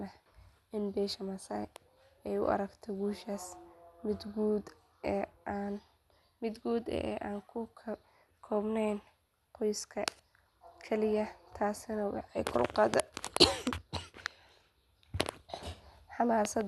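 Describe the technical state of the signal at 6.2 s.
At 6.2 s the speech carries plainly audible codec damage that runs through the whole clip, most likely MP2 compression at a rate consistent with about 80 kbps. With too few bits, the upper sub-bands are switched off, so nothing remains above 12.1 kHz. The surviving bands are coarsely quantised, giving a dull, gurgling, granular texture. A spectrogram shows a hard ceiling at 12.1 kHz, with blocky upper bands flickering on and off beneath it.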